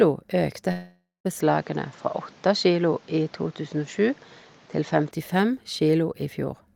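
From 0.71 to 1.27 s the sound breaks off in what is likely a long network dropout: about 0.54 s of audio never arrived. The receiver stretches the last sound into a buzzy tail that fades out, with the final 0.18 s or so near silent. On a waveform the envelope decays smoothly into a flat line. On a spectrogram the harmonics smear into blurred horizontal streaks before going dark, and normal sound returns with that stretch simply missing.

At 1.40 s the tone turns duller and stays that way until 5.11 s, which points to the input likely having switched to a poorer device. There is no gap and no jump in loudness at the changeover. The band stops cleanly at 7.6 kHz, so a spectrogram shows a hard ceiling with empty space above it. A new steady noise floor, roughly 30 dB below the sound, appears as a faint even wash under the signal throughout that span.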